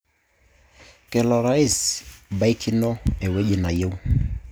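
Speech runs with word clock ticks from 0.19 to 4.45 s, about forty sharp single-sample clicks roughly every 0.1 s, from an unlocked digital receiver clock drifting around 200 ppm.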